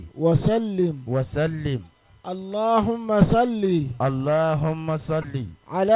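No technical faults can be heard anywhere in the audio: the signal holds steady, with no interruptions or damage at any point.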